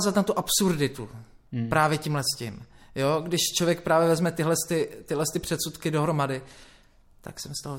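No faults can be heard anywhere in this speech recording. Nothing in the sound points to a break, glitch or distortion at any moment.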